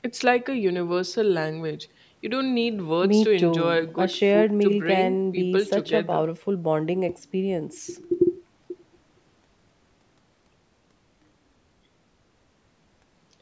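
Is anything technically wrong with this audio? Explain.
No, nothing in this speech recording is technically wrong. It has passed through a call's microphone processing, so there is no content above 8 kHz and the lowest bass has been filtered out, which is normal for that path.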